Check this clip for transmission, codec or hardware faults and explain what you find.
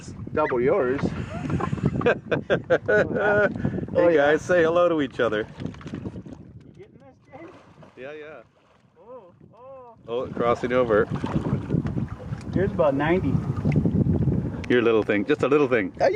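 One fault runs through the whole clip: gain pumping. The level breathes continuously, ducking under each loud sound, a swing of roughly 10 dB. Loud and quiet passages sit unnaturally close together, so the sound feels squashed. The likely cause is an input gain set far too high with a fast limiter or compressor clamping down on each peak and releasing in the pauses. What separates this from smooth level changes is timing. A fader-style move drifts over a fraction of a second to a couple of seconds, independent of content. Here the dips track the loud moments one by one.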